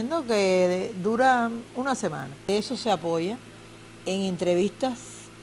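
From 1.8 to 3.5 s, resampler restarted on every block: 100 ms blocks converted separately from 24 kHz to 48 kHz leave edge errors, heard as ticks repeating at 10 Hz.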